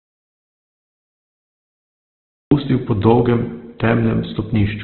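Audio dropout to silence runs from the very start of this speech clip until 2.51 s. The recording opens already in the gap and stays in silence, with no room tone at all, until the voice cuts in abruptly on "po dolgem". That silent stretch points to the input likely being lost, through a disconnected device, a failed link or a mute, while the recorder kept writing silence, so whatever came before is gone. Opus compression affects the whole clip. Nothing reaches above about 4.3 kHz, which gives a narrowband, boxed-in sound. Heavy codec damage leaves the voice rough and grainy rather than swirly, because the encoder keeps each band's energy and fills the bands it cannot afford with folded or noise-like content. That character fits the codec's music (CELT) mode at a bitrate around 12 kbps.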